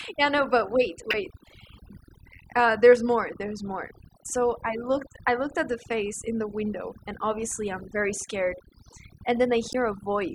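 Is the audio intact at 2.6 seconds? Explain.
No. At 2.6 seconds, as throughout the speech, overdone noise removal is audible: a denoiser set too hard cuts individual frequency bands near its noise estimate, taking quiet speech detail with them. The background drops and breaks up into twinkling specks. Unlike a plain low-pass, the top end isn't simply dulled.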